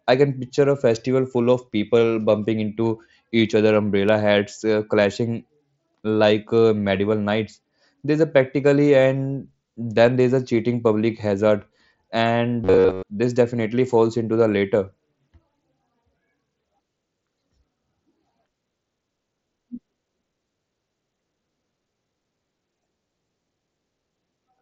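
From 12.64 to 13.06 s the speech turns into a rigid, metallic buzz fixed at 93.8 Hz that still roughly follows the words. This is robotic sound from repeated short buffers. Audio likely arrived too seldom, so a slice of about 10.7 ms was looped over most of the real signal.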